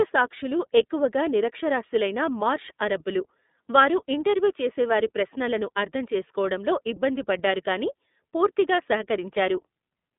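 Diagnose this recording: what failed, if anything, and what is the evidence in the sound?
The fault lies at the codec stage and runs through the whole speech recording as iLBC codec damage. Nothing is heard above about 3.8 kHz, and the line band sits roughly between 200 Hz and 3.6 kHz. What sets it apart from a plain narrowband telephone filter is the plainly audible rough, synthetic texture. Each frame's excitation is coded on its own, which fits 30 ms frames at the 13.33 kbps mode.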